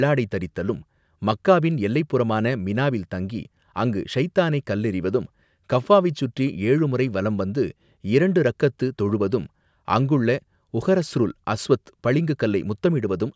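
Nothing here counts as a fault; the speech has simply passed through a call's microphone processing, which trims the lowest bass and leaves nothing above 8 kHz, and that's just how such a path normally sounds.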